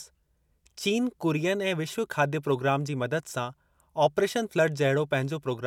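A short bit of speech, and there's nothing technically wrong to point to anywhere in it.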